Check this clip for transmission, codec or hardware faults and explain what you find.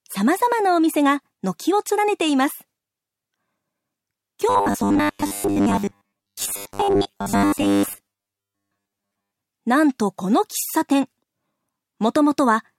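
Robotic sound from repeated short buffers, 4.49 to 9.31 s. Audio likely arrives too seldom, so a short stretch is replayed for most of that span while real audio is skipped. The 100 Hz buzz fits a 10 ms buffer, producing a rigid metallic tone loosely following the sound.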